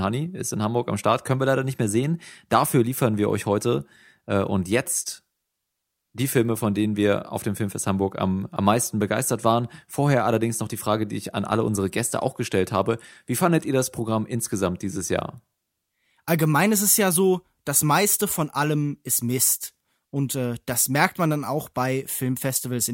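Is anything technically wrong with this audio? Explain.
No, no technical faults here.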